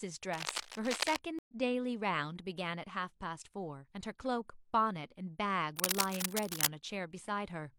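From 0.33 to 1.17 s there is cable scratch noise, likely from a worn cable, connector or control being moved so that its contact resistance jumped about rapidly. That injects dense, irregular bursts of noise, heard as a harsh scratching and rustling laid over the speech at about 5 dB below it.

At 1.39 s a stream reconnect follows. The connection dropped, the player fell silent and then restarted decoding partway into the stream. The result is a gap of about 0.1 s of silence, after which the speech picks up roughly a tenth of a second further on, so a short stretch is simply missing, and by 1.53 s the sound has resumed.

From 5.77 to 6.67 s the cable scratch noise returns, again likely a disturbed contact with fluctuating resistance. This time the crackling, rustling bursts are stronger, at about the same level as the speech, so they compete with it directly for most of that interval.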